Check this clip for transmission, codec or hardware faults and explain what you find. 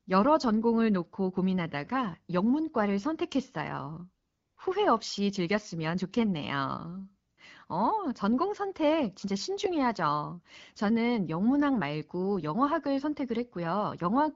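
AMR comfort noise appears twice in this speech clip. From 4.27 to 4.57 s, after "놓고 고민하다가 영문과를 선택했어요", and from 7.31 to 7.37 s, after "후회 없이 즐겼으면 좋겠네요", the phone judged the talker silent and stopped sending speech frames for 300 ms and 60 ms. The receiver filled each gap with synthetic noise built from a rough description of level and spectrum, so the real background gives way to a smooth, steady hiss that switches in and out. The AMR wideband (HD Voice) codec carrying the call adds only light coding texture.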